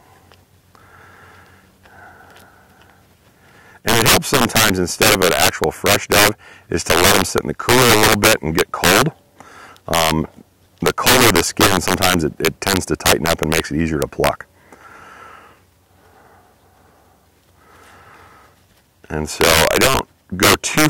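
Integer overflow hits at 3.89–6.29, 6.90–9.02, 9.94–10.11, 10.86–13.60, 14.02–14.29, 19.41–19.99 and 20.43–20.86 s. The level was pushed about 3 to 14 dB past full scale and wrapped instead of being limited, so loud peaks flip sign and snap out as harsh cracks, far nastier than clipping.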